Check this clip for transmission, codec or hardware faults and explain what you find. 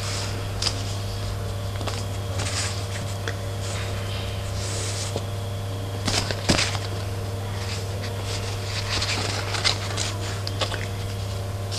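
Nothing stood out on listening to this clip.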